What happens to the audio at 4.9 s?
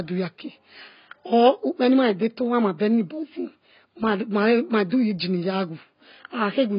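A pre-echo runs from 4.90 to 4.92 s: quantisation noise spread across the transform block leaks about 22 ms ahead of a sharp attack, heard as a brief hiss that softens its onset. Throughout, the sound is dull and smeared with nothing above 5.1 kHz, likely from heavy AAC compression at a low bitrate, consistent with roughly 16 kbps.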